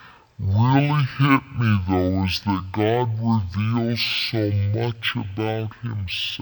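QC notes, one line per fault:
throughout: stereo read as mono. The speech plays at half speed, 0.5x, and a full octave low, 12 semitones down, sluggish and deep. Left and right samples were taken alternately as one channel, so every second of audio stretched over two.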